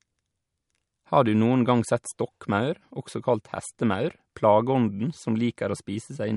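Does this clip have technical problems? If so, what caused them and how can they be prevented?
Yes. Throughout the speech there is a watery, swirling texture, and nothing is heard above 11.2 kHz. This is likely MP3 compression short of bits. The encoder cut the treble and switched weak frequency lines on and off between frames. The plainly audible damage fits a 48 kbps encode. Encoding at a higher bitrate, or working from an uncompressed master, would prevent it.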